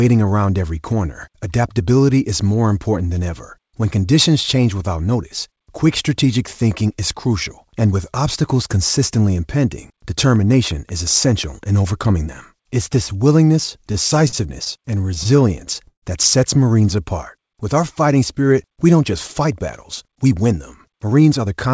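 Speech carried over a call link, with nothing above 8 kHz, shows three faults. From 10.36 to 11.64 s a train of clicks, about seven regular ticks at 5.5 per second and roughly as loud as the speech, appear as thin vertical lines across the spectrogram, likely from electrical interference. Between 13.82 and 16.04 s repeated stalls (stutter) stretch the speech: 21 jitter-buffer underruns, the longest 140 ms, are bridged by repeated, fading waveform cycles totalling 363 ms, with nothing lost. From 20.07 to 21.54 s a jitter buffer speed-up plays the audio at 109% speed, cutting around 150 ms as short pieces of one or a few pitch periods removed from the waveform while pitch holds steady.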